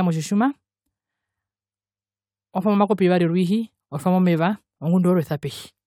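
No technical faults can be heard anywhere in the speech.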